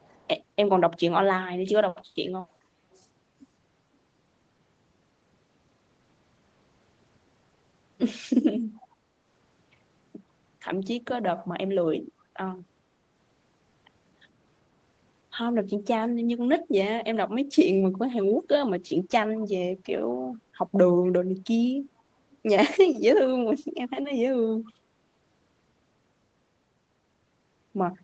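Speech with an echo leak in the first 0.28 s: a very faint copy of the talker trails about 427 ms behind, likely an echo canceller leaving loudspeaker pickup. Everything sits below 8 kHz.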